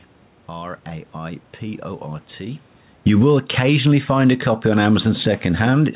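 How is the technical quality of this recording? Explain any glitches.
One glitch stands out: automatic gain falling, from 2.92 s to the end. The gain control judged the input too loud or its background noise too strong and lowered it gradually. Speech and background sink together. Around 2.5 s the talker's level shifts with movement. The band stops near 4 kHz, which fits G.711 mu-law at 64 kbps.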